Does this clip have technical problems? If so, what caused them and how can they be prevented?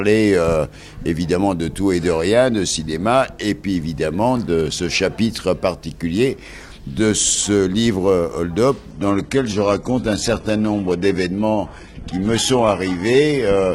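Yes. At 8.91 s an adaptive stream at a lower bitrate takes over without a gap, running to the end. The spectrogram shows nothing above 11.8 kHz. A larger playback buffer or a steadier connection keeps the player from switching down.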